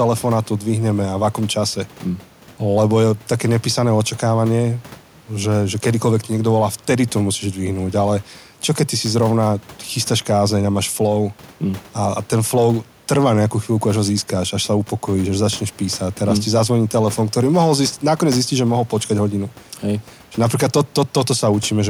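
Nothing here goes wrong technically: the only thing to hear besides the speech is the room's own background sound, sitting about 28 dB beneath it, and that belongs to the recording rather than to any fault.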